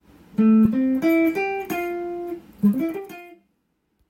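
From 2.66 to 3.36 s, a fast, fine ticking rides on the sound as its level falls by about 20 dB, giving a buzzy zipping texture that stops once the fade ends. This is zipper noise: the gain is lowered in many small discrete jumps, around 400 a second, with no smoothing between them, so each jump puts a tiny click into the waveform and the run of clicks is heard as the zip.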